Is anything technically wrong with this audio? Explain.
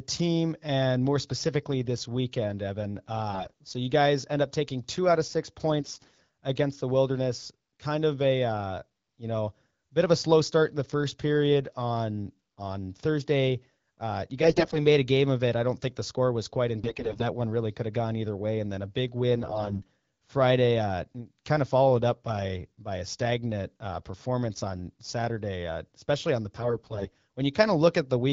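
Yes. AMR bit errors appear at 3.32–3.52 s, 5.80–6.20 s (after "two out of six"), 14.42–14.78 s (before "made a game of"), 16.78–17.23 s, 19.36–19.82 s (after "then a big") and 26.55–27.10 s. Flipped low-priority bits misplace excitation pulses and skew gain and spectrum values, so the speech turns hoarse and gargly while its level holds. On a spectrogram, harmonics smear into noisy bands. Under it, the wideband codec sounds clear.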